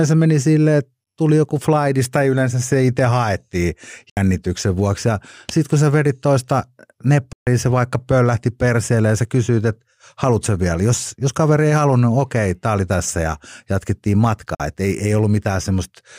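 Three short holes cut the speech: at 4.10 to 4.17 s, right after "yleensä se itse haettiin"; at 7.33 to 7.47 s, just before "se vaikka pöllähti perseelle"; and at 14.55 to 14.60 s, after "oli tässä ja jatkettiin". They last about 70, 140 and 46 ms, and after each the speech picks up further along, as though it kept running. This is likely a Bluetooth dropout, where packets missed their deadline and were discarded, leaving silence until valid data arrived.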